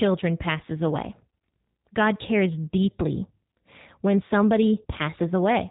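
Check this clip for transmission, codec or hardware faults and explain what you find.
One codec fault runs through the whole recording. G.729 codec, throughout. Speech is resynthesised from a filter and sparse pulses, fitting an 8 kbit/s stream. Nothing passes above 3.8 kHz. It sounds plainly rough.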